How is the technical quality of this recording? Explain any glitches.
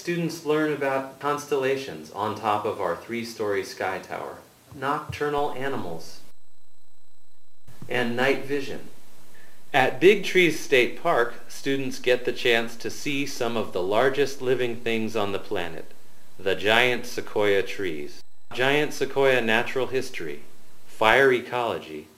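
The recording has one glitch, a DC step. At 5.38 s the waveform's zero line abruptly shifts by about -29 dBFS, as happens when a converter recalibrates or an offset input switches in. The offset holds until 21.13 s. Each jump, in and back out, sounds as a low thump while the audio carries on unchanged.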